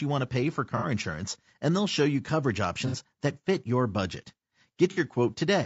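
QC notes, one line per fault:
Throughout: low-delay AAC compression. The speech has a rough, grainy texture, with noise filling the spaces between pitch harmonics and a top band that sounds thin and synthetic. The damage is plainly audible and likely comes from AAC-ELD, the low-delay AAC used for video calls, at a rate consistent with about 32 kbps. Its very short frames resolve harmonics poorly and need more bits, leaving too few for clean detail at this rate.
0.77–0.86 s, 2.87–2.96 s and 4.91–5.00 s: AAC frame loss with concealment. About 60 ms of audio is missing each time, just after "want to pay for", after "they'll show you coverage" and after "that fit your budget". The decoder fills each gap by reusing the last good spectrum with scrambled signs or interpolated energy. Instead of a dropout, each gap is a short smeared, noisy, phasey patch, which fits a couple of lost frames each time.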